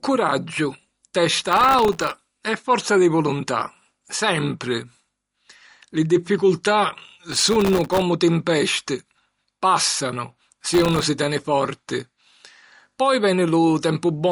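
Right from the start the speech has that watery, swirly quality, and there's nothing above about 11.2 kHz, so the top end just stops. That's most likely MP3 compression, and a fairly starved encode, in line with something like 48 kbps. With bits that short, the encoder chops the treble at a fixed point and lets weak frequency detail blink in and out between frames, which is why the sibilants sound plainly chirpy and the consonant attacks smear.

Then there's processor overload crackle, three bursts of it: 1.47 to 2.17 s, 7.32 to 8.02 s, and a shorter one from 10.74 to 11.03 s. Each is a gritty, tearing crackle laid over the speech. The processor couldn't keep up with very small buffers, well under a millisecond each, and dropped dozens to about a hundred of them in quick succession. Every miss leaves a tiny hard-edged hole of silence, and that rapid string of holes is what you hear as crackle until the load eases.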